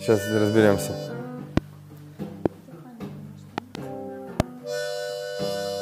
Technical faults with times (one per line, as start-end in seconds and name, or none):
1.57-1.60 loud pop
2.46-2.48 loud pop
3.58-3.77 loud pop
4.40-4.42 loud pop